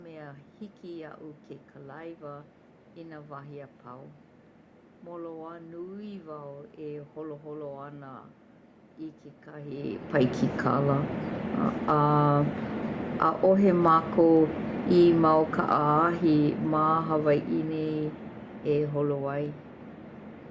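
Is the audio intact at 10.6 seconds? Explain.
No. At 10.6 seconds the automatic gain falling fault has just begun. From 10.51 s the automatic gain control judges the input too loud or its background noise too strong and starts pulling its gain down, easing it lower over the span to 19.37 s by about 12 dB in total. At 10.6 s the level is still near its loud starting point. From there the speech and the room background behind it sink together, gradually, rather than the talker simply getting quieter.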